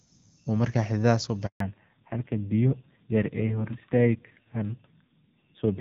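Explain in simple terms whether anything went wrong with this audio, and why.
A handover gap runs from 1.46 to 1.60 s. The call was passed from one network to another, and for about 140 ms no speech arrived, so the voice cuts out and whatever was said in that moment is simply lost.

A fallback to narrowband follows at 1.60 s and lasts to the end. Before the switch the call used HD Voice, which carries clear, full speech. Afterwards it drops to an older, cruder phone codec that keeps nothing above 4 kHz, so the voice sounds muffled, flat and somewhat rough.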